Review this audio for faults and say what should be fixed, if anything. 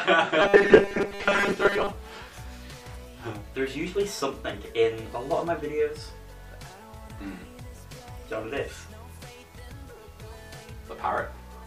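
Robotic sound from repeated short buffers, 0.42 to 1.93 s: a rigid 200 Hz buzz replaces most of the sound, likely from a roughly 5 ms buffer being replayed. Preventing it means delivering audio to the output reliably enough, with adequate buffering, that stale buffers never need repeating.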